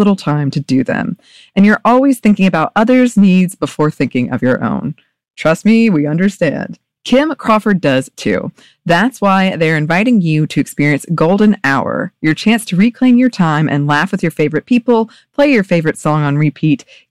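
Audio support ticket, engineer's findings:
Hard clipping throughout the speech. Peaks cut flat, heard as crackle on louder syllables. Level driven about 7 dB past what a gain or converter stage can pass. Roughly 2 percent of samples hit the ceiling. Flat tops add high harmonics.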